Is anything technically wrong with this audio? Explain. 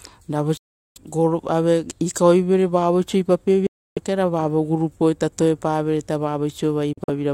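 Yes. The speech drops out three times, most likely from a Bluetooth dropout, where packets don't reach the headphones in time and get discarded. From 0.57 to 0.98 s there's a hole of about 384 ms, and the sound resumes right at "gol ave ikauevere vavoiso". Another gap runs from 3.67 to 3.99 s, about 300 ms, just after "ave ikauevere vavoiso ipapapie". Near the end, from 6.93 to 7.13 s, it stutters, with about 85 ms lost in bits of up to about 43 ms. Each time the speech picks up later, as if it had kept playing.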